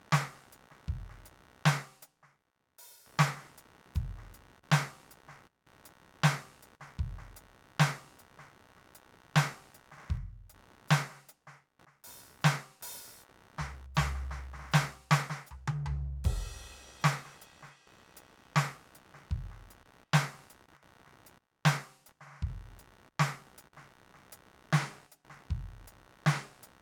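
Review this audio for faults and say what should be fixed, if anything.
A buzzing, chirping layer of computer activity noise runs through the whole music clip. It pulses at a rate of around 70 Hz. It sits about 30 dB below the music. It shifts with the computer's workload, not with the music. Changes in processor, graphics or mouse load pull on the ground shared with the audio circuit. That disturbance leaks into the signal. To fix this, use an external, isolated audio interface or a ground-loop isolator, and keep analogue cables away from the computer.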